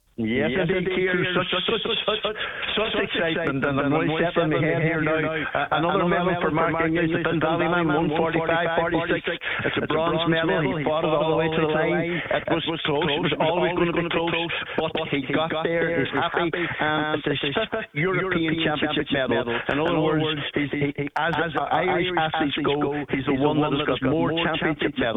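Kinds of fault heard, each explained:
Doubled audio track: a second full-band copy of the sound trails the original by roughly 150 ms and sits only a few dB lower, around 5 dB down. It carries no decay or room colour and runs throughout, most likely from a slower second capture path mixed back in.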